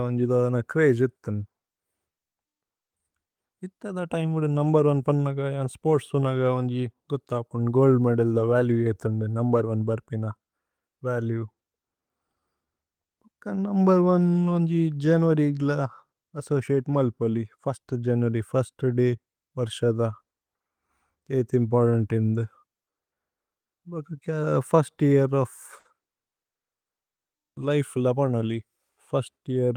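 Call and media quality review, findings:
Clock drift between sender and receiver, whole clip. Sender clock running about 4% slow. Jitter buffer keeps draining, so the receiver must pad the speech repeatedly at uneven intervals.

Repeated timing corrections, 0.14 to 25.10 s at 96% speed, about a second added overall; 27.06 to 29.40 s at 95%, roughly a tenth of a second. Receiver repeating short pieces.

Short stall from a late packet, 25.79 to 25.87 s. Buffer ran empty. Last sound held 60 ms until arrival. Nothing lost. Brief drawn-out sound, slight buzz or dip.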